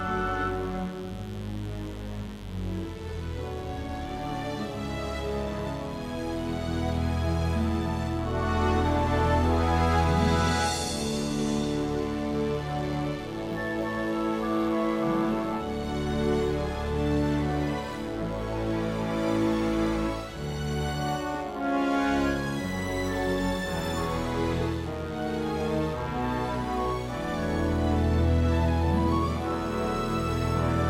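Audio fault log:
throughout mains buzz: a steady, raspy buzz sitting roughly 20 dB under the sound, built on 50 Hz. Sharp switching spikes twice per cycle spread harmonics up to several kHz, so it rasps, unlike smooth hum, which stays a low pure tone.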